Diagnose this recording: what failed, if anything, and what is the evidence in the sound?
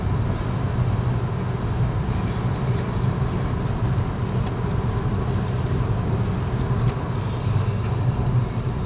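Nothing in the recording points to a failure at any stage: the everyday sounds arrive continuous and intact, with no interruptions, level jumps or added artefacts.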